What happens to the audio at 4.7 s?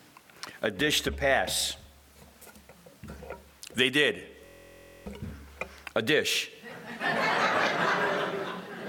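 That's a system hang loop from 4.46 to 5.06 s: a 23 ms slice, fitting a 1024-sample buffer, repeats at 43.1 Hz, giving a steady buzz.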